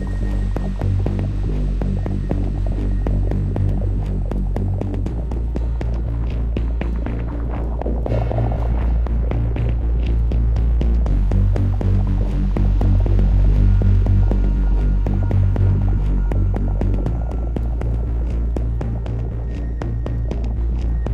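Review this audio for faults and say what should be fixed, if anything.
No faults; nothing needs fixing.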